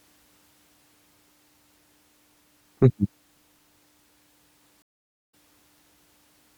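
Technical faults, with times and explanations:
4.82–5.34 s, stream reconnect: the speech drops out into about 0.48 s of silence, then resumes at a later point, roughly a fifth of a second further on, so a short stretch of the speech is skipped. The connection broke, the player went quiet while it re-established the link, and a fresh decoder started mid-stream at the live position rather than where playback had stopped, leaving a gap followed by a jump forward.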